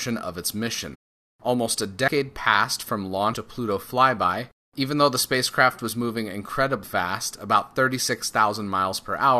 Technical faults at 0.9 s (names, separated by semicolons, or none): compressed frames skipped